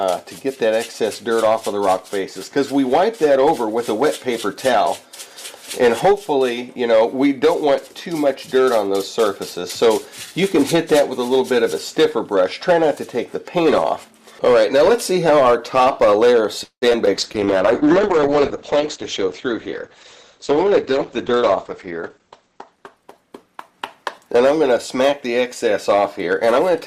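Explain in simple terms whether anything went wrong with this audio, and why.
A few things go wrong here, stacked up toward the end.

Hard clipping runs through the whole clip. The signal was pushed a bit louder than the chain could pass, so a small share of the loudest peaks get sliced flat. That flattening adds a gritty crackle whenever the sound gets loud.

From 16.63 to 17.08 s there's repeated packet loss, which gives a robotic sound. Four chunks of audio went missing, the longest about 0.19 s. Each hole got patched by stretching out the last bit of sound, so nearly half that stretch is filler and comes out choppy.

Right after, at 17.15 s, a call bitrate drop kicks in and lasts to 26.80 s. The connection decided it had much less room, so the encoder squeezed the audio hard. Everything above about 8 kHz is cut away, leaving it muffled and rough, at its worst for about 5 s.

Inside that, from 18.76 to 20.31 s, there's a jitter buffer speed-up. 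Audio had piled up in the receiver, so it trimmed out tiny slices, about 150 ms in total. Playback runs roughly 7% fast at the same pitch and sounds a little hurried.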